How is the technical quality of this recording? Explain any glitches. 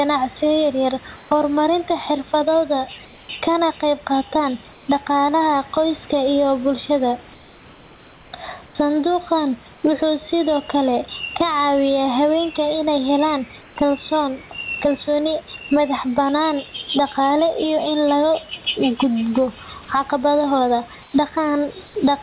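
The recording has two clear faults: gain pumping throughout, and short patches of comfort noise replacing the background. The audio is also narrowband, with nothing above 4 kHz, which fits a G.711 telephone codec.

Gain pumping runs through the whole clip. The gain swings around 15 dB. The likely cause is input gain set far too high, with a fast limiter clamping down on every peak. The speech sounds squashed.

Comfort noise replaces the background at 1.16–1.31, 3.05–3.29, 4.73–4.88, 7.34–8.75, 9.74–9.83, 13.61–13.76, 21.02–21.14 and 21.86–21.95 s. The longest patch follows "dhaqaalaha qoyska iyo bulshada". The sender likely stopped transmitting in pauses, and the receiver filled them with synthetic noise. The result is flat and featureless, about 2 to 4 dB quieter than the real room noise.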